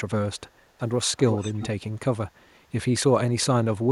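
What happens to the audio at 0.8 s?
From 0.78 to 0.82 s a brief echo leak occurs: a very faint copy of the speech arrives 356 ms late. This is likely a far-end echo canceller letting loudspeaker pickup through, a discrete delayed repeat rather than a room-reverb smear.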